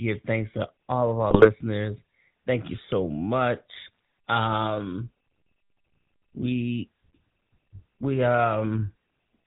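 GSM full-rate codec coding runs through the whole speech recording, giving it a buzzy, gravelly roughness and a band that stops at 4 kHz. The codec models the vocal tract and excites it with sparse regular pulses, a sound that fits a 13 kbps full-rate stream. GSM bit errors strike at 1.30–1.51 s and again at 3.86–3.99 s, where the audio breaks into squawks, pops and gargling. Corrupted filter, pitch or gain values reach the decoder, warping the spectrum and jolting the level frame by frame.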